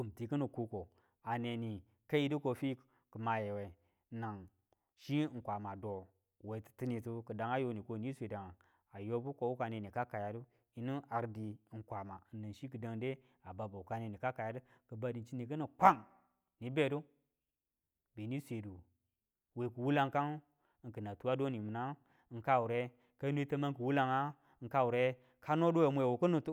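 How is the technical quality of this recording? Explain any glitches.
No glitches can be heard anywhere in this recording.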